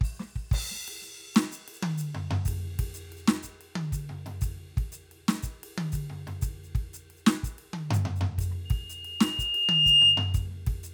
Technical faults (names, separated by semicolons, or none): loudspeaker feedback squeal